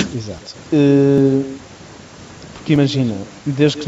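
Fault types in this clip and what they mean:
echo with no canceller: The far end's loudspeaker feeds its microphone and nothing subtracts it, so the talker's own speech returns after the network round trip. Throughout, every phrase is trailed by a thinner copy roughly 150 ms later, about 14 dB below the direct speech.
dropped buffer (overrun): Samples were likely not collected before the hardware overwrote them, so stretches are lost and the surrounding audio is spliced together without any gap. At 0.38, 1.18 and 2.76 s the speech jumps ahead, by roughly 20, 70 and 40 ms respectively.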